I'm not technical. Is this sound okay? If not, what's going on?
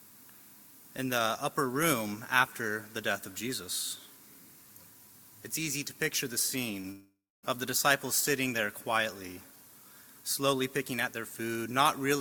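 No. At 6.81 to 6.85 s there is a short concealed packet loss. About 20 ms of audio arrived too late, and the receiver patched the gap by extending the sound just before it. The result is a brief smear or wobble.

From 6.91 to 7.45 s the sound turns into a fading buzz or hiss, then roughly a quarter second of silence, and resumes with about half a second missing. The likely cause is a long network dropout, with the receiver filling the gap until it gave up.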